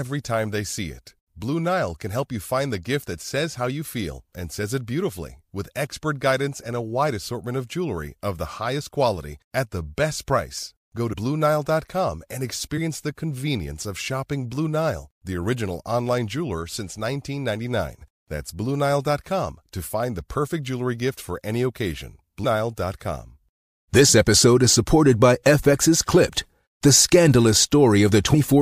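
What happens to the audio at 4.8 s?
Nothing goes wrong at 4.8 s; the audio there is intact, with no dropout, click, distortion or other fault.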